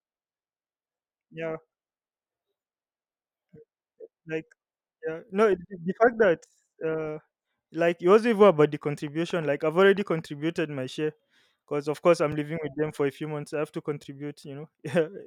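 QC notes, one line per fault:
8.65 to 10.20 s, train of clicks: after "it wasn't even", about ten similar clicks at an uneven pace near 5.2 per second, peaking roughly level with the speech and ticking over it until "my share because of". The likely cause is interference from nearby equipment or a faulty connection or power supply.
12.32 s, block of digital silence: between "because of course I'm" and "living with them for", the audio drops to zeros for 3.33 ms and returns with no fade. With abrupt edges on either side, so short a gap is heard as a tick or dip rather than as silence.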